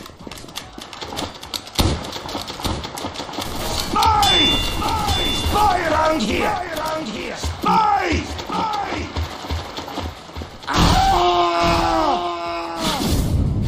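A doubled audio track runs through the whole clip: every sound returns as one full-band copy about a second later, roughly 5 dB quieter than the original. Unlike an echo or reverb, the repeat is a single identical copy with no decay, no further repeats and no room colour, and the gap stays fixed. That points to the audio likely being captured twice, once through a slower path, and mixed together.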